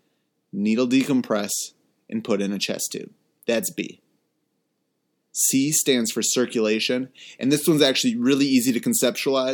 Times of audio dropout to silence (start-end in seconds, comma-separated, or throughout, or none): none